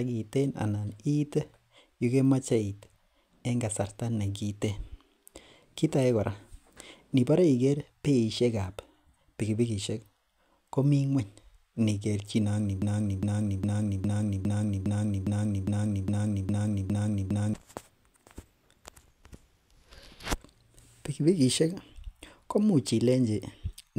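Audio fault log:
12.82–17.54 s, broken-record loop: a 0.41 s fragment of the speech plays twelve times back to back, identical each pass, and whatever should have been heard in those 4.7 seconds never arrives. The likely cause is a stalled player or stream resending the last buffer it held. On a waveform the same envelope shape tiles end to end; a spectrogram shows a repeating block pattern with seams every 0.41 s.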